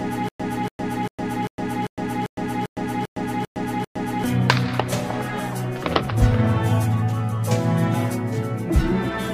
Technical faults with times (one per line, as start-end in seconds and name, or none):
0.00-4.24 stutter with silent gaps